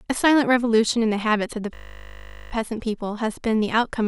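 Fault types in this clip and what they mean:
System hang loop: a stalled driver left the sound hardware replaying one 20 ms slice of its buffer, so from 1.74 to 2.52 s the speech becomes a steady 50 Hz buzz. The waveform shows an identical block repeating, and the spectrogram shows flat harmonic lines spaced 50 Hz apart.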